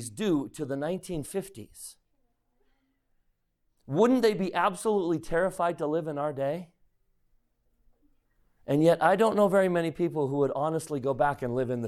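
Listening to the speech recording, nothing stood out as a technical problem.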